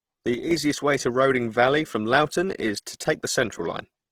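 Right from the start there's audible Opus compression: grainy, rough texture rather than swirl, likely the music mode running at something around 16 kbps. At 0.34 s a sudden gain jump drops the sound and noise floor together by about 6 dB until 0.51 s, just before "way to," likely from an unramped gain change.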